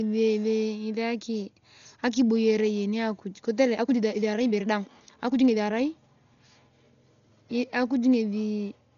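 From start to finish the speech is dull and band-limited, and a rough, fluttering noise clings to voiced sounds, most likely from heavy Dolby Digital compression at a bitrate around 40 kbps. Unlike a simple low-pass filter, the missing detail is filled with a grainy, shifting hiss in the upper band, because lines starved of mantissa bits are replaced by dither noise in each block.

From 3.57 s to 5.87 s the pace suddenly rises to about 1.52 times normal while the pitch stays unchanged, which points to a time-stretched section squeezed to fit a shorter length. The speech sounds choppy and rushed as short pieces are dropped, and the original pace returns abruptly at 5.87 s. A plain speed-up would raise the pitch along with the tempo. Here only the timing changes.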